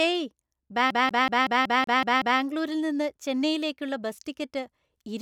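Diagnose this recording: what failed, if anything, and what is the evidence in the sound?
Playback: CD stuck on one turn, 0.91–2.40 s. The laser skips back, repeating one 187 ms slice eight times, seen as identical spectrogram blocks separated by brief gaps.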